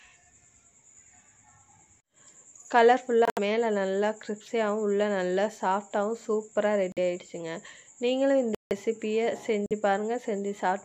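At 3.25 s, 6.92 s, 8.55 s and 9.66 s the sound drops abruptly into silence for about 0.13 s, 0.06 s, 0.18 s and 0.06 s: corrupt frame muted. Damaged compressed frames were rejected by the decoder and replaced with silence, so each gap cuts in with no fade. The gap lengths fit whole frames, and the sound resumes on time with no timing shift.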